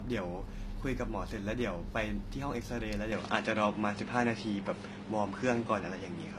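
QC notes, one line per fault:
throughout: low-bitrate audio saved at a high bitrate. The speech carries the artefacts of an earlier encoding, and nothing is audible above 14.9 kHz even though the file is a generous MP3. The likely cause is an earlier pass through a low-bitrate codec, in the region of a 24 kbit/s HE-AAC stream, whose losses and band limit were baked in before re-encoding. The later high-bitrate encode stores those damaged details faithfully but cannot rebuild them.
3.12 s to end: input switched to a poorer device. With no gap at the changeover, the speech abruptly turns duller and boxier. The top end now stops at 10.5 kHz, the level steps by about 5 dB, and a new, faint noise floor appears roughly 50 dB under the speech. This is likely a mid-recording swap to a lesser microphone or headset profile, whose narrower bandwidth, different tonal colour, gain and self-noise replace the original input's character.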